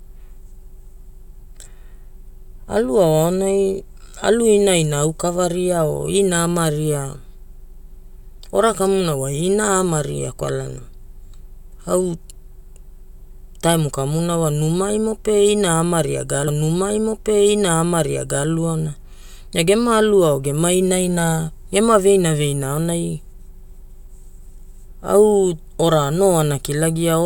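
A stream segment repeated at 16.47 s, just after "ina ama ria ga": the player queued the same stretch of the speech twice, so about 2.01 s replays until 18.47 s, with a brief blip marking the jump back into already-heard material.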